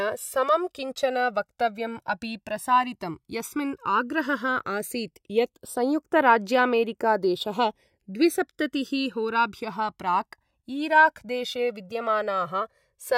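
A speech recording whose two channels drift apart for its whole length. The left and right sides were captured on devices running from separate clocks that disagree by a few hundred parts per million, so the offset between them grows steadily and reaches about 2 ms by the end. Summed to mono, this produces a slow flanging sweep. A spectrogram shows comb-filter notches gliding gradually across frequency.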